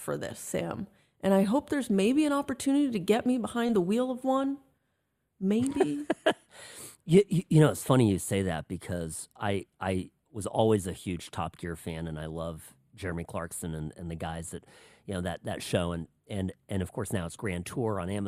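Nothing in this speech recording stood out as a technical problem on listening.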